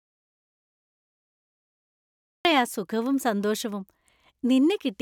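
From the very start until 2.45 s there's an audio dropout to silence: dead silence with no room tone, likely a lost input, before the speech cuts in.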